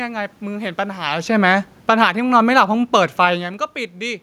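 A speech recording with two gain faults. From 0.99 s to 3.31 s there is automatic gain falling. The gain control judged the input too loud, or its background noise too strong, and eased its gain down by about 5 dB. The voice sinks gradually, and the room noise sinks with it. That shared drop gives it away. A talker leaning back would lower only the voice. Such a real movement does occur around 1 s, right where the fall begins, and again near 3.5 s. Inside that fall, from 2.1 s to 2.51 s, comes automatic gain rising. The control briefly judged the level too quiet and pushed its gain up by about 3 dB. Voice and background swell together over roughly 0.4 s. Then the downward slide resumes. Both faults come from the gain control reacting to level changes.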